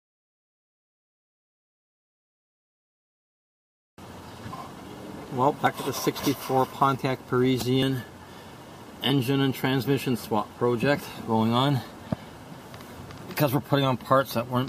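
Three quick skips at 5.67, 6.99 and 7.83 s, each with the audio jumping ahead, roughly 50, 20 and 70 ms gone, likely dropped buffers from an overrun.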